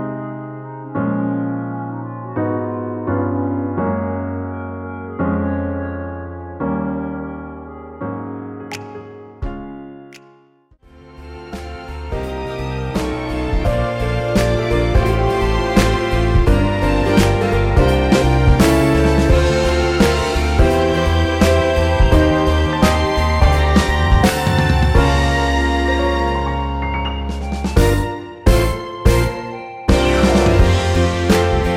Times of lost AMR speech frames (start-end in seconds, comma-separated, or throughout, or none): none